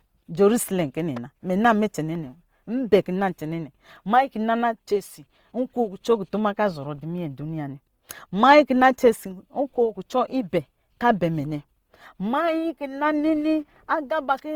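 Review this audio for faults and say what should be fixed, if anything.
Throughout, the speech sounds grainy and rough, with tones turned noisy. This is likely Opus compression in CELT mode filling starved bands with noise, consistent with about 24 kbps. To prevent it, re-encode from the original source at a higher Opus bitrate so no bands run short of bits.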